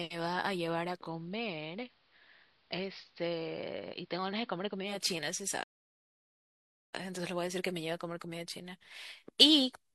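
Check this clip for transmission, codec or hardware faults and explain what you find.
Two faults stand out in this speech clip.

From 0.91 to 5.04 s the sound turns dull and hissy and drops about 3 dB. This is digital radio blending to analogue: the receiver cross-fades over 208 ms to the AM broadcast, with hiss roughly 40 dB down.

From 5.63 to 6.94 s the audio cuts to silence for about 1.29 s mid-flow, then resumes. This is a playback stall, likely the player running out of data or being blocked.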